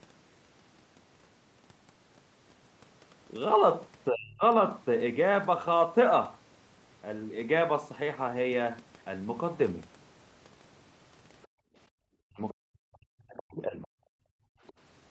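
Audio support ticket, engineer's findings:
Speech suppressed in double talk, 4.09 to 4.43 s: near-end speech dips by about 35 dB for roughly a third of a second. Likely the echo canceller's suppressor, which clamps the mic when far-end and near-end overlap. This differs from a dropout because the level sinks rather than cutting to silence. Same fault at 12.24 to 13.95 s: the longest event, about 1.5 s of suppressed talker audio, dropping by about 40 dB.

Other side's voice leaking through, 11.43 s: a brief scrap of a second voice about 35 dB under the talker. Likely residual loudspeaker echo the canceller failed to subtract. It is a separate voice, not a reverb tail of the talker. Again at 14.7 s, about 30 dB down. Both scraps sit beside the gating below.

Background gated by the echo canceller, 11.47 to 11.96 s: room tone falls by about 40 dB for under half a second, then returns. The canceller held the mic down while the speaker played. 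It hits the room sound rather than the talker, which separates it from double-talk suppression. Repeats at 14.23 to 14.62 s, also about 40 dB. Top end stops at 8 kHz throughout, consistent with Opus wideband on the call path.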